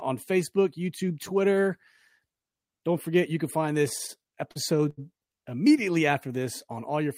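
Repeated stalls (stutter) run from 3.89 s to 4.99 s, starting after "forget you can find" and clearing by "immediately after". Audio reached the receiver late or more slowly than it played out, so the jitter buffer kept running dry. Each time, the last sound was stretched to bridge the wait. Eight short hitches add about 0.2 s of filler, roughly a fifth of that stretch, with the longest hold 81 ms. Nothing drops out, but the speech drags and stumbles.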